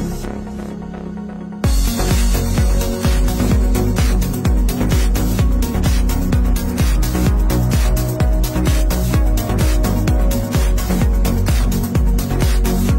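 Sample clock jitter from 10.32 s to the end: sample timing wavers by a few microseconds, adding roughness about 35 dB down, strongest on loud, bright passages.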